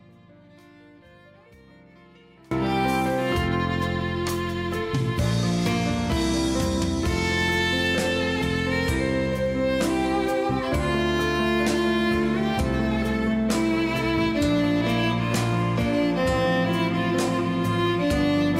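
From the start until 2.51 s the clip is in an audio dropout to a faint residue. Only a thin leak of the sound remains, roughly 25 dB below normal level, before the full signal returns abruptly. This is likely a lost signal feed while the downstream path stayed live.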